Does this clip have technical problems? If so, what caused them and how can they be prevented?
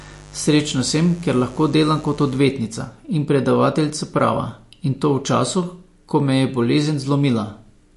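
Yes. From 0 to 2.38 s there's mains buzz, a raspy 50 Hz hum with harmonics, roughly 20 dB under the speech, from switching spikes leaking in. Shield cables and keep dimmers and rectifiers off the recording circuit.

Throughout, the speech sounds watery and swirly with nothing above 11.3 kHz, likely MP3 compression at a low bitrate around 48 kbps. Encode at a higher bitrate or keep a lossless master.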